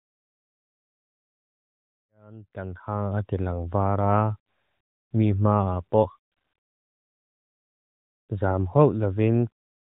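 No technical faults occur at any point, so there is nothing to describe in time order.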